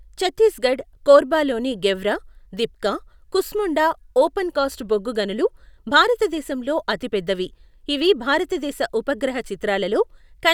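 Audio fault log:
No faults are audible, and the speech signal stays steady and continuous over its entire run.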